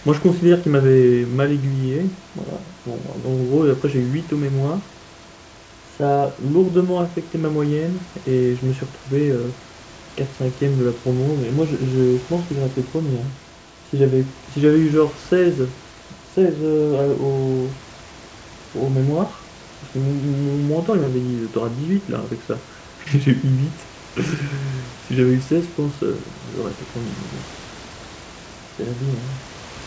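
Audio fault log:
Nothing stood out on listening to this speech recording.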